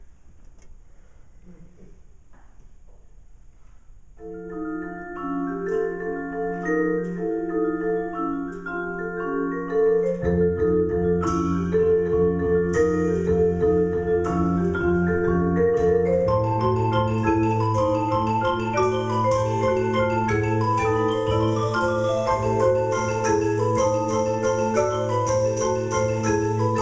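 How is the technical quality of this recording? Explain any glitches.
No glitches can be heard anywhere in the recording, and the signal holds steady without any dropouts, clicks or interruptions.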